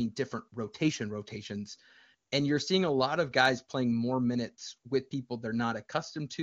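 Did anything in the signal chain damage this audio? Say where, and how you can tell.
No, nothing in the chain audibly damages this speech. It has the band-limited sound of the AMR wideband (HD Voice) codec at a high rate, consistent with the top 23.85 kbit/s mode, with the speech staying clear and at most a faint trace of the coding.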